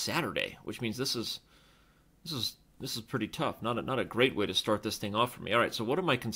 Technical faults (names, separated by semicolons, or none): clock slip clicks